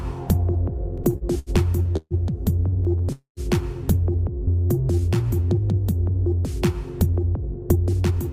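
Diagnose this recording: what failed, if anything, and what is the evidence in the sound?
Repeated stalls (stutter), network/jitter buffer: 0.97–2.14 s has seven gaps (longest 139 ms) and 2.71–3.09 s five short ones. Each gap repeats the last sound, showing as smeared, stretched bands.

Call audio freeze, likely from a network hold-up that emptied the jitter buffer: at 3.12–3.40 s, 244 ms of continued sound fades, with 130 ms silent, seen as a blank vertical strip.

Jitter buffer slow-down: from 4.34 to 5.18 s the audio plays at 87% speed and unchanged pitch, with 117 ms added. The waveform shows repeated near-identical cycles.

Jitter buffer speed-up: from 7.06 to 8.17 s the audio runs at 110% speed and the same pitch, with about 100 ms cut. It sounds hurried, and the spectrogram looks compressed in time.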